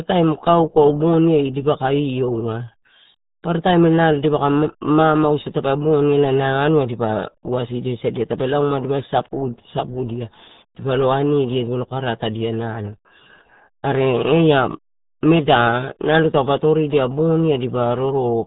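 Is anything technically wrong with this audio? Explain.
Yes. The speech has been through the RealAudio 14.4 codec for the whole clip. This is RealAudio 1, a speech codec built for dial-up modems. It runs at 8 kbit/s. At that rate it throws away most of the signal. Nothing passes above about 3.8 kHz, so the top of the spectrum is gone. The codec damage is heavy. The voice sounds muffled and dull. It has a gargly, watery texture throughout.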